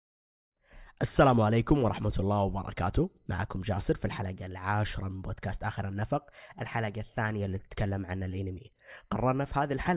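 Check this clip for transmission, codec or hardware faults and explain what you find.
No transmission, codec or hardware faults.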